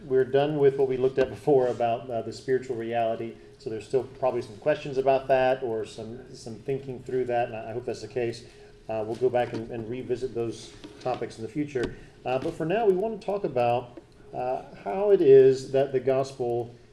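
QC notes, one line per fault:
Throughout: resampler restarted on every block. The rate converter, on a downsampling path that fits a 48 kHz to 24 kHz conversion, was reset at each 100 ms block, so it filtered every block as if nothing came before or after it. The samples at each block edge are computed against the wrong neighbours, leaving a small discontinuity at every boundary. This is heard as a steady tick at 10 per second, riding on the signal and falling away when the sound stops.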